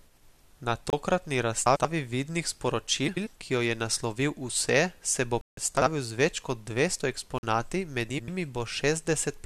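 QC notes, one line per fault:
0.90–0.93 s, block of digital silence: the output buffer was likely not filled in time, so about 28 ms of samples became zeros; the sound drops out with no fade, leaving a short hole.
1.66–1.85 s, frames out of order: two neighbouring runs of about 93 ms each, consistent with four-frame blocks, were decoded in swapped order; the stretch flutters.
3.07–3.27 s, frames out of order: another pair of roughly 93 ms blocks played with halves exchanged, giving a garbled flutter, with no time lost.
5.41–5.57 s, block of digital silence: a longer 161 ms stretch was zeroed, heard as a hole in the speech.
5.77–5.87 s, frames out of order: a shorter swap of two 46 ms halves, pointing to two-frame blocks, produces a brief stutter.
7.38–7.43 s, block of digital silence: 46 ms of zeros, a length that fits a 2048-sample buffer missing its deadline; the abrupt cut and return produce a short gap.
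8.09–8.29 s, frames out of order: two roughly 93 ms blocks again arrive in reversed order, so the passage jumps forward then back, heard as a garbled flutter.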